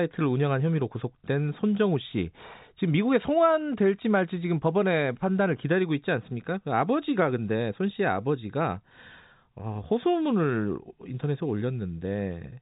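No technical faults are audible.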